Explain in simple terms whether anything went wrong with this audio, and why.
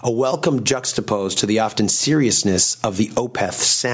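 Throughout the clip, loud and soft parts end up closer in level, and the sound is squashed. This is gain pumping, likely from a limiter fighting a microphone level set far too high.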